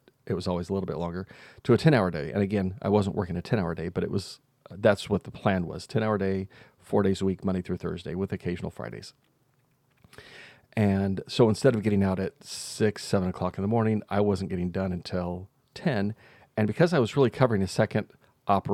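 Nothing goes wrong anywhere in this speech recording; there's simply no technical fault to point to at any moment.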